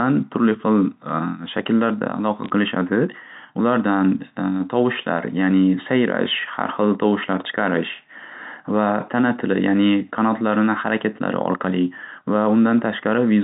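Bit errors on a digital phone line occur from 2.44 to 2.5 s: a fraction of a percent of the bits on the 64 kbps G.711 mu-law link were flipped, each corrupting one sample, so sharp ticks and brief crackle land over the otherwise unchanged telephone-band speech.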